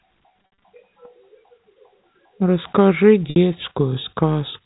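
Speech over a telephone-band channel, with audio cut off above 4 kHz as G.711 coding does, marred by packet loss with pitch repetition. From 0.42 to 0.62 s, about 140 ms of audio drops out in scattered runs, the longest 60 ms. Each gap is bridged by repeating the last pitch period and fading it out over about 50 ms. At 3.30 s a further 60 ms gap, which points to a few consecutive lost packets, fades into silence before speech returns with a short cross-fade.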